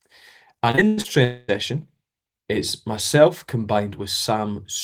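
From 0.71 to 1.06 s, repeated packet loss makes the speech choppy and robotic. Four short holes, the longest about 98 ms, are patched by repeating earlier sound.

From 1.24 to 1.50 s, the last sound is stretched into a buzz or hiss that fades for about a quarter second, with no silence. The likely cause is a long network dropout.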